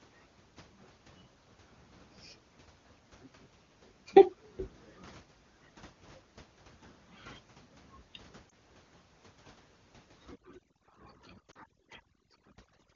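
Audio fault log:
8.49–8.53 s and 11.51–11.57 s, lost AMR speech frames. Radio errors made frames fail their checks. The wideband decoder repeated the last good pitch and vocal tract settings at falling gain. One lost 20 ms frame gives a brief dip. Two frames, 40 ms, drop to near silence.
10.28–12.95 s, overdone noise removal. Noise reduction set too strong mutes frequency bands near its noise estimate. Quiet parts of the voice go with them. The room noise, about 24 dB below the speech, drops and breaks up into twinkling specks.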